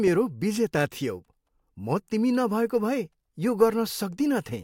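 No technical faults can be heard anywhere in the recording.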